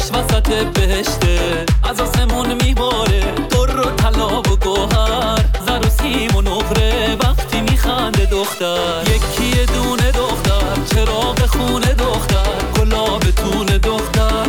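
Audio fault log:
6.00–11.75 s, low bit depth without dither: samples likely truncated to 6 bits, so the error follows the sound as grainy distortion about 30 dB below it.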